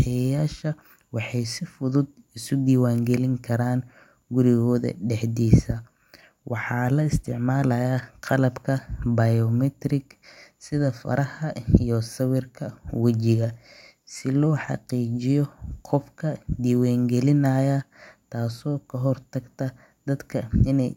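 No technical faults are audible.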